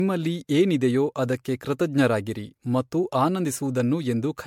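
All the way through, the speech has that swirly, hollow generation-loss sound, with smeared consonant attacks. It's likely from MP3 being re-encoded about seven times, each pass on a shifted frame grid stacking up noise and spectral holes, worse than a single 96 kbit/s encode would sound.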